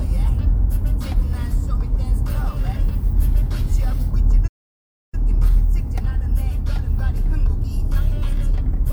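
At 4.47 s the player likely ran short of data or had its output thread blocked, a playback stall, so nothing reached the output. The sound cuts off mid-flow into silence for about 0.65 s, then resumes at 5.14 s.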